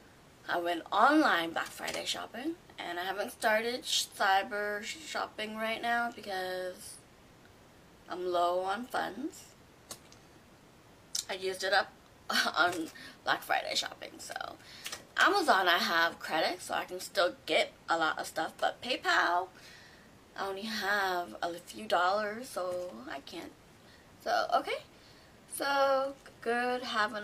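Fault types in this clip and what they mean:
Nothing stood out as a problem on listening to this recording.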